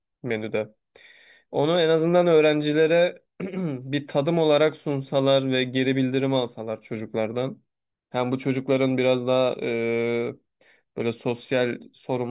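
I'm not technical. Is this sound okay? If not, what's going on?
Yes, this sound is okay; nothing is going wrong in it.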